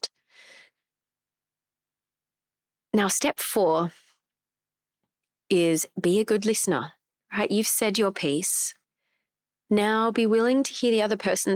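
No technical faults can be heard anywhere in the speech recording, and the signal holds steady throughout.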